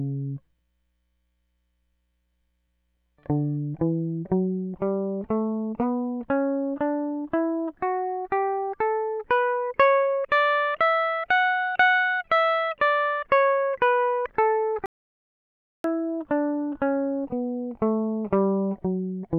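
At 14.86 s the music stops dead, and nothing returns until 15.84 s: an audio dropout to silence lasting about 0.98 s. The gap holds silence with no room tone, most likely because the input signal was briefly lost while recording carried on writing zeros. The music in that second is simply missing. On a waveform it shows as a flat line; a spectrogram shows a clean black vertical band with hard edges on both sides.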